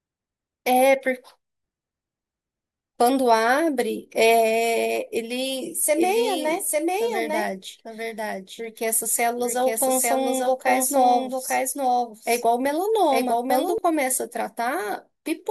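A doubled audio track runs from 5.96 s to 13.78 s. A second full-band copy of the speech trails about a second behind, a few decibels quieter and dry, and cuts in and out abruptly. It likely comes from a slower duplicate capture path or an out-of-step edit.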